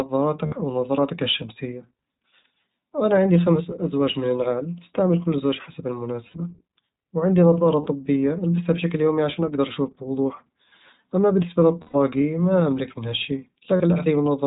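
A speech clip carried through the iLBC codec. Nothing above 4 kHz survives, so the sound is narrowband and muffled. The coding damage is plainly audible as a rough, slightly synthetic edge. The 20 ms framing and the texture fit iLBC's 15.2 kbps mode. Each frame's excitation is coded on its own. That keeps the speech clear but adds grain.

There are five gaps from lost iLBC frames. The first runs from 0.46 to 0.55 s. The second is at 6.28 to 6.37 s, after "أستعمل كل زوج حسب". The third is at 7.82 to 7.88 s. The longest, about 120 ms, sits at 11.82 to 11.96 s, between "أما بالنسبة" and "ما أملك منها شيء". The last is at 13.76 to 13.82 s, after "ما أملك منها شيء". In each gap the decoder repeats the last pitch cycle blended with noise. This gives a held, buzzy vowel. The voice snaps back right after every gap. The gap lengths fit runs of two to six 20 ms frames.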